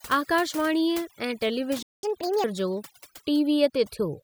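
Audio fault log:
throughout: overdone noise removal. The noise reduction is pushed so hard that bands near the noise estimate are cut to nothing, taking the quieter parts of the speech with them. The background drops to a near-silent floor dotted with twinkling specks. A spectrogram shows a black background scattered with isolated bright dots.
1.83–2.03 s: playback stall. The speech cuts off mid-flow for about 0.2 s and then resumes where it stopped. The likely cause is a player starved of data or a blocked thread. On the waveform it appears as a flat line, and on the spectrogram as an empty vertical band.
2.03–2.44 s: catch-up at higher speed. Immediately after the stall the backlog plays at 1.5 times normal speed, which raises the pitch by roughly seven semitones. The speech briefly sounds hurried and chipmunk-like before dropping back to normal. On the spectrogram the harmonics shift upward and sit further apart for that span.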